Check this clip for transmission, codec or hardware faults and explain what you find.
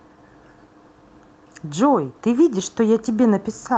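No transmission, codec or hardware faults turn up anywhere in the clip. The speech has come through a call path, and its top end stops at about 8 kHz, which fits Opus running in wideband mode.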